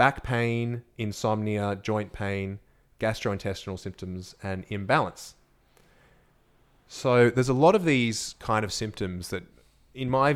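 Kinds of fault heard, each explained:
Nothing stood out on listening to this speech recording.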